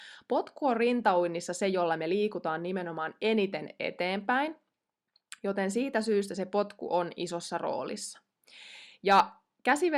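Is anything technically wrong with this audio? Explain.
Yes, there is hard clipping in this speech. Peaks are cut flat where the signal exceeds what a stage can pass. At 1.08 s, just before "se jolla me liikutaan", it is a brief crackle about 1 dB over. From 9.11 to 9.20 s it is a harsher burst about 4 dB over. From 9.69 to 9.72 s it is a faint tick right at the limit. These are abrupt, bright, high-harmonic crackles, not the gradual rounding of soft saturation or limiting.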